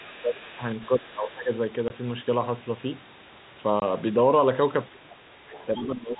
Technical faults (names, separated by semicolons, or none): speech suppressed in double talk; other side's voice leaking through; packet loss filled with silence